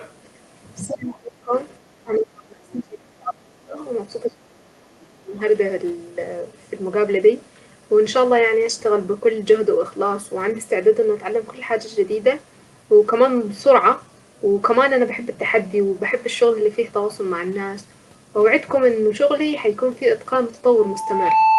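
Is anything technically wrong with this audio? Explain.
Yes, three kinds of fault can be heard in this speech.

Other side's voice leaking through, 0.00 to 0.13 s: a faint second voice sits beneath the start, roughly 25 dB below the main speech. The likely cause is that the far end, played on the talker's loudspeaker, reached the microphone and the echo canceller didn't fully remove it. The leaked fragment is brief and weak.

Speech suppressed in double talk, 0.87 to 1.52 s, 1.89 to 3.77 s and 4.25 to 5.34 s: the talker's level sinks in these stretches, dropping by as much as around 30 dB at worst. This likely happened because both sides spoke at once, and the echo canceller, unable to tell the local voice from the loudspeaker echo, attenuated everything.

Loudspeaker feedback squeal, 20.75 to 21.59 s: a pure 881 Hz tone appears and swells over about 0.7 s until it sits roughly 5 dB above the speech, running to the end. 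The microphone is picking up the loudspeaker it drives, and at 881 Hz the loop gain exceeds one, so that frequency keeps feeding on itself and growing into a howl.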